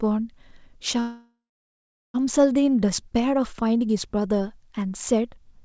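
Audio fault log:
1.00–2.17 s, call audio freeze: the sound stops and the final fragment is stretched into a fading buzz that thins to about 0.77 s of silence, likely because packets were held up and the jitter buffer ran dry. The clip then resumes exactly where it stopped, so nothing is cut out; the rest simply arrives about 1.14 s later. A packet-loss dropout would skip sound instead. The surrounding band-limited audio, with nothing above 8 kHz, fits a G.722 call path.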